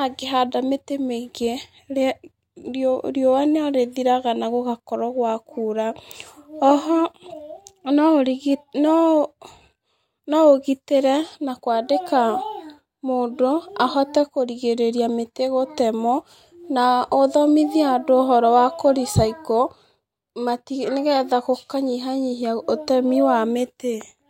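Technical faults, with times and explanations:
Nothing technical to flag here; the speech runs along without any faults turning up anywhere in the recording.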